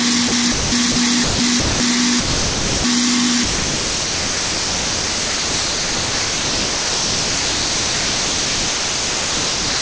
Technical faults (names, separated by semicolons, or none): sound dropped by the voice detector